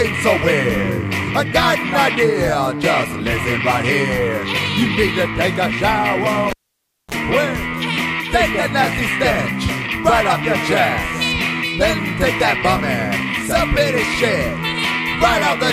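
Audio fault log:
6.50–7.14 s, cable pulled and plugged in: a live connection was broken and then remade, so a pop opens 0.59 s of near silence, a 32 ms burst of 60 Hz mains buzz sounds while only the plug tip touches, and a second pop marks the sound's return.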